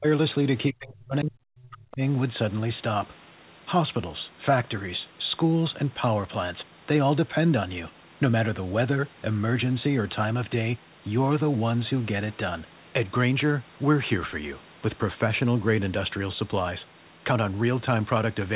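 The echo canceller most likely mistook near-end speech for loudspeaker echo during double talk and pulled the gain down, so speech is suppressed in double talk twice. From 0.00 to 0.06 s the opening sound dips sharply, roughly 30 dB. From 0.70 to 2.01 s the suppression is deeper, around 40 dB, and hits about a second of that span. All of it sits inside a narrow band ending at 4 kHz, which fits a G.711 A-law call path.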